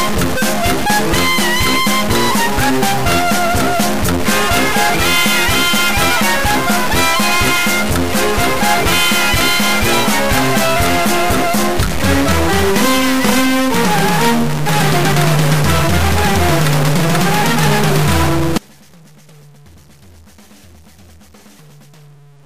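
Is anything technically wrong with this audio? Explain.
Yes, two faults are audible.

A stuck bit runs through the whole clip. The likely cause is one data line or converter bit held permanently at 0 or 1, so roughly half of all sample values are shifted by that bit's fixed weight, following the shape of the waveform. The result is a distortion riding on everything, and because small values near zero flip in sign, the quieter stretches fill with a steady noise floor instead of falling silent.

An audio dropout to a faint residue begins at 18.58 s and lasts to the end. The main signal cuts off abruptly, far more suddenly than a pause or fade would. It likely comes from the source being lost while the downstream path stayed live. What remains is a faint leak of the sound, roughly 30 dB below its normal level.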